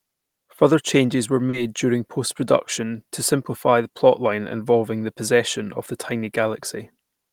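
Short concealed packet loss hits the speech at about 1.49 to 1.55 s. Roughly 40 ms of audio failed to arrive at the decoder in time, so the receiver covered the gap by extending the preceding sound, carrying its pitch forward where voiced or substituting shaped noise where not, and then crossfading back into the real signal. The result is a brief smear or wobble at that point.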